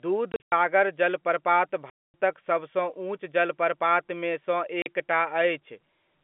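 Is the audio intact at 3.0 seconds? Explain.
Yes, at 3.0 seconds the speech is intact, carried through the G.711 telephone coding path with no fault at that moment.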